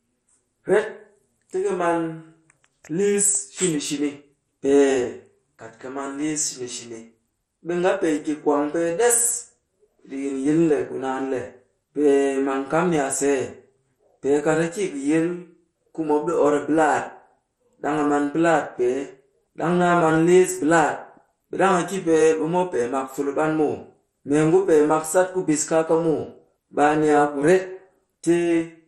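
Throughout, the speech stops near 13.1 kHz and sounds gurgling and granular, likely MP2 compression; unlike a plain low-pass filter, the remaining upper bands flicker.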